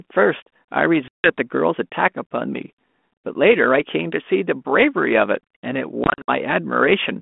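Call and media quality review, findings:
Packet loss on an ADPCM call, 1.08–1.32 s. 160 ms hard-edged silent gap, consistent with about seven lost packets. Speech resumes slightly distorted. Decoder predictor and step size drifted from sender's, then resettle within tens of ms.

Packet loss on an ADPCM call, 6.04–6.29 s. 140 ms of dropouts scattered over 240 ms, longest run 60 ms, again suggesting about seven packets. Each resumption distorts briefly while the G.726 state recovers. Stream is 32 kbit/s, 200–3400 Hz band.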